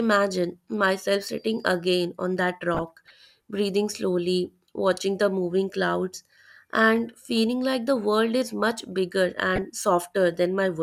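DAB burbling hits the speech at 2.74 to 3.30 s, 7.26 to 7.28 s and 9.56 to 9.62 s. Residual bit errors (a fraction of a percent) corrupt MP2 audio data in single sub-bands. It sounds like short blips of noise in single sub-bands, and a spectrogram shows isolated horizontal band flashes.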